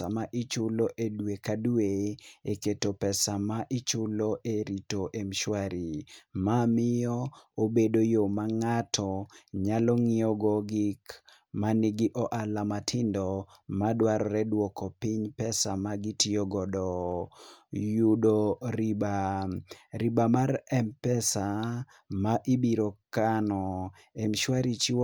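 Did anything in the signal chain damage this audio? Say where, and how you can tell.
No, nothing in the signal chain has damaged this speech recording. No stage, from capture through to playback, leaves an audible mark anywhere in the clip.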